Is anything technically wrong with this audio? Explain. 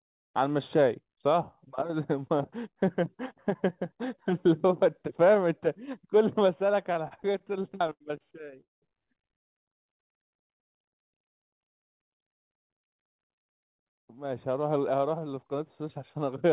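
Yes, there are four timing faults stacked in the middle of this speech clip. All of it sits on a narrowband call path with nothing above 4 kHz, which fits G.711 mu-law at 64 kbps.

From 6.84 to 8.60 s there are repeated stalls (stutter). Packets kept turning up late, so the jitter buffer drained about 19 times in a row. Each time, the receiver stretched the last bit of sound to cover the hole. That adds up to around 330 ms of filler, with the longest single gap 81 ms, so roughly a fifth of that stretch is concealment. Nothing is actually lost, but the speech drags and hiccups.

Right after that, from 8.61 to 8.85 s, there's a call audio freeze. The buffer ran dry again, most likely because packets were held up in transit. The receiver carried the last sound forward for about 210 ms, and about 160 ms of that fades away to silence. When the packets arrive, the speech picks up where it stopped. 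A gap has been inserted rather than anything cut, and the playout delay ends up about 210 ms longer.

From 9.65 to 10.73 s there's a jitter buffer slow-down. With the reserve low, the receiver padded the audio by repeating single pitch periods and bits of pauses over and over, adding about 49 ms. Playback runs at about 96% speed with the pitch unchanged, so sounds come out a little drawn out.

Then from 12.69 to 14.88 s there's a jitter buffer speed-up, working the other way. The buffer now held more than it wanted, so it trimmed short pitch-period chunks again and again, around 150 ms in total. Speech runs at about 105% with the pitch intact, and it sounds a touch hurried there.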